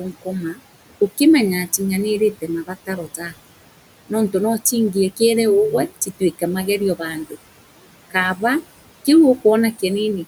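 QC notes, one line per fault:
Throughout, noise suppressor artifacts: the steady room noise, sitting about 18 dB under the speech, is pulled down by about 18 dB in the gaps and lets back in under the speech, so the background pumps instead of staying level or dropping out abruptly.
3.07–3.33 s and 6.96–7.36 s, speech cut by the noise suppressor: bits of soft speech, adding up to about a tenth of a second in each span, are mistaken for noise and turned down by about 10 dB and about 14 dB, so they sound swallowed rather than clipped or dropped.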